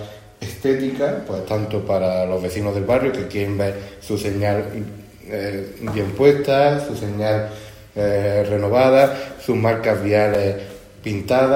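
The output buffer likely twice went unfilled in time, leaving a block of digital silence that gives a tick at 1.36 s (3 ms) and 10.34 s (5.3 ms, which fits a 256-sample buffer).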